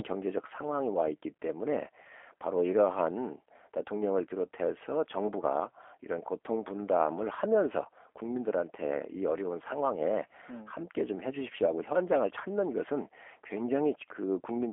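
Throughout, G.729 codec damage is plainly audible: speech rebuilt from filter and pulse models sounds rough and synthetic, consistent with an 8 kbit/s coder, with nothing above 3.7 kHz.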